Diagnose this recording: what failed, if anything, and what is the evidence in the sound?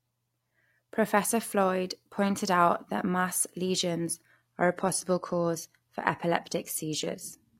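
The failure is at the network stage: an adaptive stream at a lower bitrate. At 4.30 s the speech abruptly loses its clean top end. The treble turns thin and synthetic, with more codec smearing, and stays that way to the end, with no gap at the switch. The connection slowed, so the player stepped down a rung. The sound fits a move from full-band AAC near 96 kbit/s to an HE-AAC stream around 24 kbit/s, which rebuilds the highs artificially.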